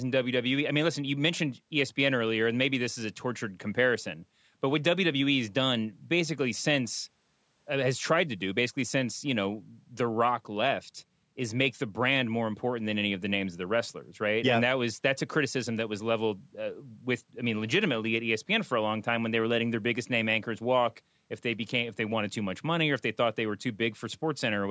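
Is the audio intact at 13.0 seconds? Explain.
Yes, at 13.0 seconds the speech is intact, with only the ordinary band limit of call microphone processing, which leaves nothing above 8 kHz.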